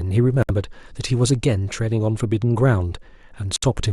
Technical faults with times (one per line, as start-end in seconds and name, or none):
0.43-0.51 Bluetooth dropout
3.56-3.64 Bluetooth dropout